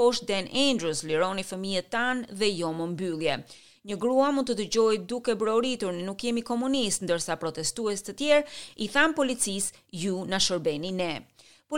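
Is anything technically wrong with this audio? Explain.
No, nothing technically wrong can be heard in this audio. There are no dropouts, glitches or other faults to point to anywhere in it.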